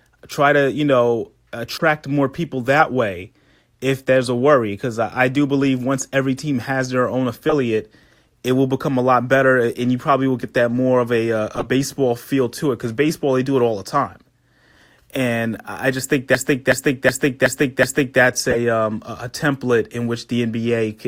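At 1.73 s there's a short squeaky blip, the first of several corrupt frames being decoded: damaged compressed data played anyway, throwing energy into the wrong frequencies. More follow at 7.49 s after "team has their own", at 11.55 s between "of a a uh" and "feel to it because", and at 18.49 s just before "um a template in".

From 16.35 to 18.20 s there's a system hang loop. Things froze and the hardware kept replaying one 372 ms chunk five times, a stutter at about 2.7 Hz that fits a 16384-sample buffer.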